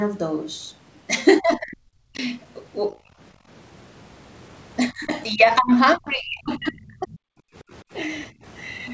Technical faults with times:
1.40-2.18 speech suppressed in double talk
3.35-3.47 background gated by the echo canceller
4.90-7.26 speech suppressed in double talk
8.32-8.44 background gated by the echo canceller

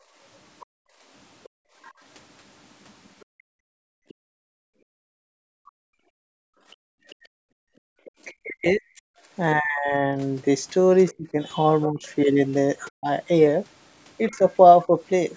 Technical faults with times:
0.00-8.14 background gated by the echo canceller
0.60-4.14 other side's voice leaking through
5.66-5.79 speech suppressed in double talk
8.05-8.11 other side's voice leaking through
8.42-14.88 speech suppressed in double talk
11.08-15.37 other side's voice leaking through

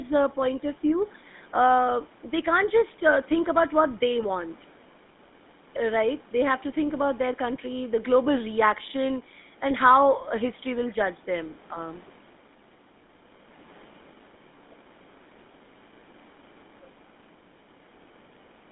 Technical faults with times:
0.00-18.72 GSM full-rate codec

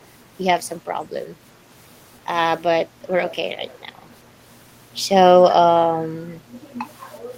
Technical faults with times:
3.28-3.78 echo leak

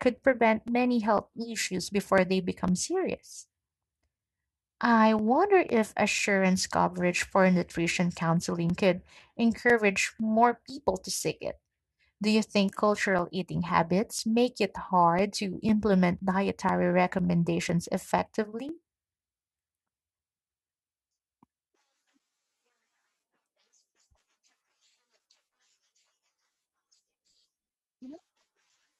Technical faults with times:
0.18-28.70 periodic USB or driver dropouts

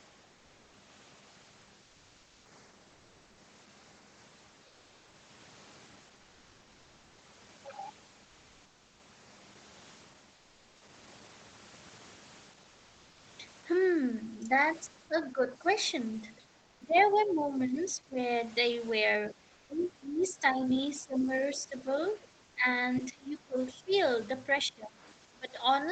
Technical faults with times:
2.91-3.37 comfort noise in place of the background
4.67-5.13 comfort noise in place of the background
10.35-10.81 comfort noise in place of the background
15.32-18.17 speech suppressed in double talk
16.96-17.87 other side's voice leaking through
19.25-20.68 other side's voice leaking through
19.34-25.91 speech suppressed in double talk
19.53-19.69 comfort noise in place of the background
22.05-24.00 other side's voice leaking through
22.45-22.55 comfort noise in place of the background

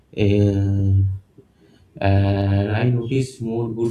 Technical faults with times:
2.42-3.91 channel delay (doubling)

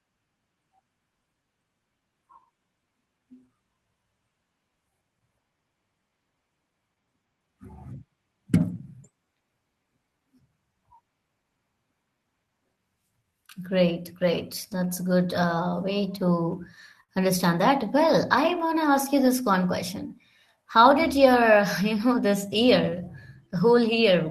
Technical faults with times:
0.00-24.31 clock drift between sender and receiver
0.26-23.88 repeated timing corrections
17.03-17.12 short stall from a late packet

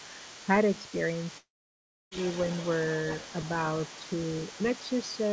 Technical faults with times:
0.00-5.33 other side's voice leaking through
1.38-2.13 long network dropout
3.98-4.06 speech suppressed in double talk
4.82-5.16 speech suppressed in double talk

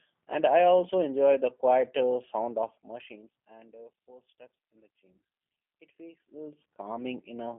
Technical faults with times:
0.00-7.59 G.729 codec

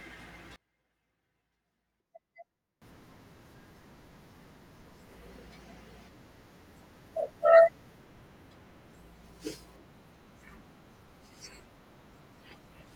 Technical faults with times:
0.56-2.82 one channel inverted

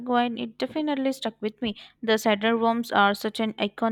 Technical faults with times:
none

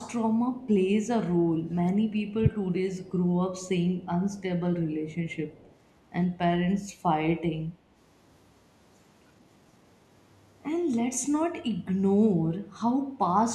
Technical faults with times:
0.43-0.61 speech suppressed in double talk
1.27-1.31 background gated by the echo canceller
1.59-2.52 speech suppressed in double talk
3.06-3.11 echo leak
4.32-4.43 echo leak
5.14-5.73 echo leak

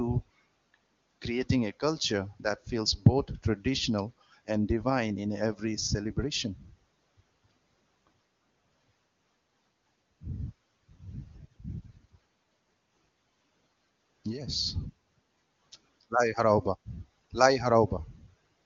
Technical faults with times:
none

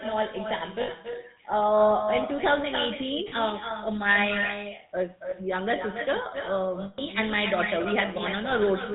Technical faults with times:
0.00-8.94 echo with no canceller
0.00-8.94 GSM full-rate codec
0.82-0.89 lost GSM frames
3.28-3.33 lost GSM frames
5.30-5.34 lost GSM frames
6.82-7.00 lost GSM frames
8.50-8.54 lost GSM frames

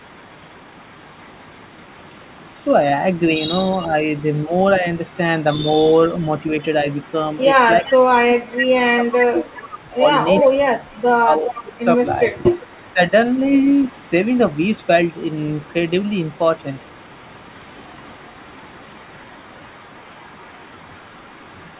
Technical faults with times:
0.00-2.59 echo leak
3.74-5.14 echo leak
3.86-5.65 speech suppressed in double talk
6.07-8.58 echo leak
7.82-13.12 speech suppressed in double talk
9.86-17.34 echo leak
18.42-21.80 echo leak

